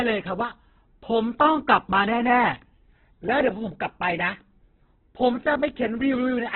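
From start to finish the speech sounds rough and grainy, with a narrow, muffled, telephone-like band and nothing above 4.2 kHz. This is likely heavy Opus compression at a very low rate, fitting about 8 kbps, in its CELT music mode: band energies are kept but starved bands are filled with folded or noise content, so tones turn gritty. A spectrogram shows a hard ceiling near 4.2 kHz with smeared, noisy harmonics below it.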